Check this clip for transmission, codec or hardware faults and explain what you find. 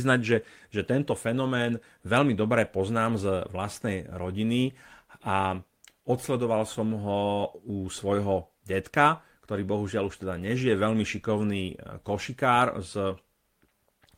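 No transmission, codec or hardware faults are audible here.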